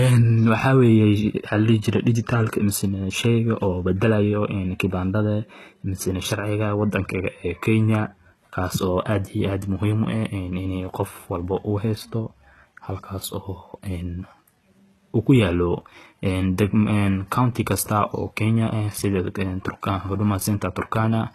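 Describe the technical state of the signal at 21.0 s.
At 21.0 s the speech carries the same damage heard across the whole clip. It is likely HE-AAC compression at a heavy setting. The codec keeps only the lower spectrum and rebuilds the treble by copying lower bands upward under a coarse envelope. The rebuilt top does not match the real harmonics, so s sounds turn gritty and lispy. The sound points to a very low bitrate, around 16 kbps.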